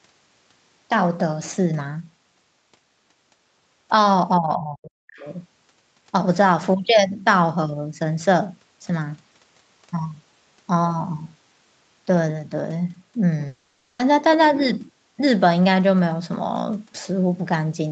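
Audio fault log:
4.38–5.27 s, speech suppressed in double talk: the talker dips by as much as 40 dB for roughly 0.7 s in total, likely because the echo canceller ducked everything during overlap.
5.2–5.31 s, other side's voice leaking through: a brief scrap of a second voice slips in, around 35 dB under the talker, likely echo the canceller left behind.
13.47–14.02 s, long network dropout: about 0.52 s never arrived, and the whole gap is filled with a fading buzzy continuation of the last sound, likely packet-loss concealment.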